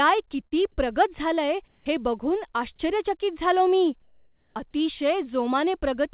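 At 0.47 to 0.54 s, just before "प्रगत झालंय हे", there is short concealed packet loss. About 30 ms of audio never arrived in time, and the decoder bridged roughly 40 ms by extending the preceding speech before crossfading back. The result is a brief smeared wobble in the speech.

After "प्रगत झालंय", from 1.68 to 1.86 s, the background changes to a flat, featureless hiss about 1 dB louder. This is likely comfort noise in place of the background. The sender stopped transmitting during the pause, and the receiver substituted synthetic noise. The same thing happens after "आश्चर्यचकित झालो मी", from 4.02 to 4.56 s, where the fill is about 3 dB quieter than the real room sound. Throughout the clip, nothing is heard above 4 kHz, consistent with a narrowband G.711 call path.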